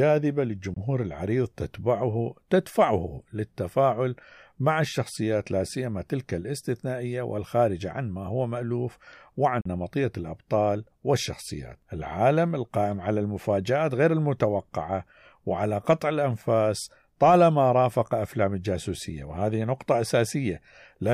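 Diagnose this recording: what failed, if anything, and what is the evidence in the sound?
The speech drops to silence twice, from 0.74 to 0.77 s and from 9.61 to 9.66 s, then resumes further along, so sound is lost rather than paused. The stage is the wireless playback link, and the likely cause is a Bluetooth dropout: late packets were discarded. Gaps of 20 and 41 ms fit one and two lost packets. A waveform shows flat holes, and a spectrogram shows blank vertical strips across all frequencies.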